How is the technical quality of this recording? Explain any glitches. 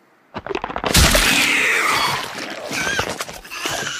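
Listening to the recording, nothing in it stood out as a technical problem or glitch.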